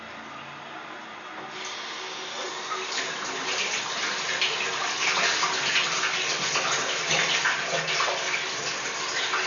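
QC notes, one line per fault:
Nothing to flag here; I listened all the way through and there's no fault to note in these sounds.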